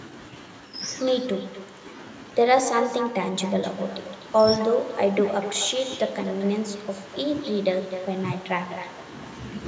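Speech with an echo running through the whole thing, and no canceller is catching it. Every phrase comes back roughly a third of a second later, about 11 dB down and thinner, because the far end's loudspeaker is feeding its microphone straight back down the line. The band tops out at 8 kHz, as you'd expect from call microphone processing.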